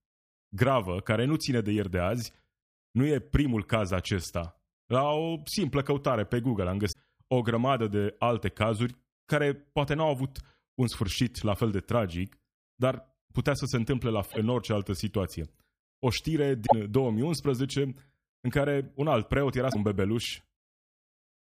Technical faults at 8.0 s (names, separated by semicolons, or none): none